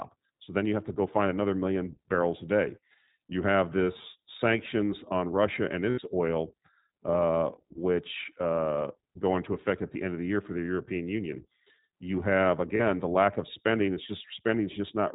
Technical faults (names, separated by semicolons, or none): iLBC codec; lost iLBC frames